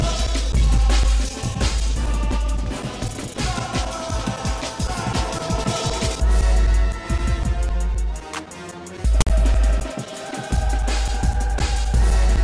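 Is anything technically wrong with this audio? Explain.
Yes. From 9.21 to 9.27 s a harsh, lopsided rasp cuts in with hard edges and drops into dead silence. This is file tags played as audio: a block of text tags and zero padding is decoded as samples, so the text becomes offset buzz and the padding becomes silence.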